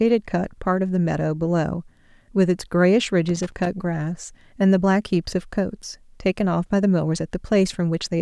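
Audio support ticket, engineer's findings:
Loose connector crackle, 3.28–3.67 s, about 0.39 s burst. Irregular scratching over the speech. Probable component: worn or dirty cable contact or jack. Contact making and breaking as it shifts, chopping the signal. Distinct from digital dropouts or buffer clicks: uneven, gritty spacing with no regular repeat rate. Reseat or clean connector, check cable strain relief.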